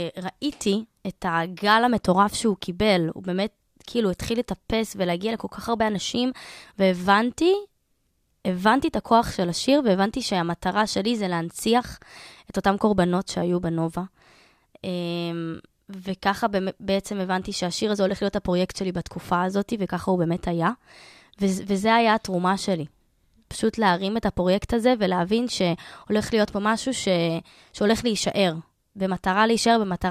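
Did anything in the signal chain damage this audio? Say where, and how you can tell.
No, nothing here damaged it.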